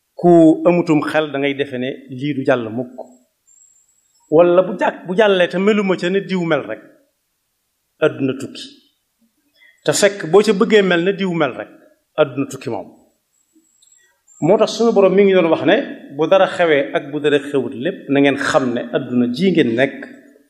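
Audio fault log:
No fault is found in the audio.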